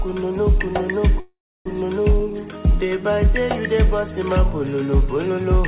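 At 1.2 s the sound stalls in a call audio freeze lasting until about 1.68 s. The last sound is stretched into a fading buzz or hiss that drops to about 300 ms of silence. When the audio resumes, it carries on exactly where it stopped. Unlike packet loss, nothing is skipped; everything after is pushed about 0.45 s later, likely because late packets left the jitter buffer empty. Throughout, the narrowband path leaves nothing above 4 kHz.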